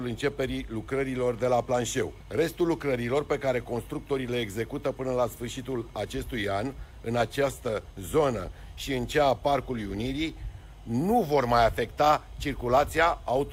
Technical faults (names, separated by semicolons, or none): none